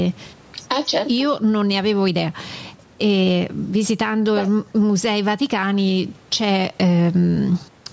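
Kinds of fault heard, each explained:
Gain pumping: the level is pulled down on loud sounds and squashed, a swing of around 10 dB, likely from excessive input gain with a fast limiter clamping it. Unlike a noise gate, the background never vanishes.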